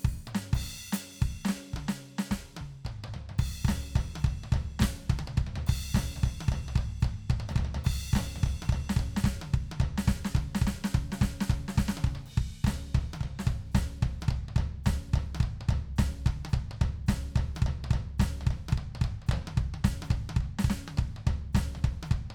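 No technical faults can be heard at any point in this music.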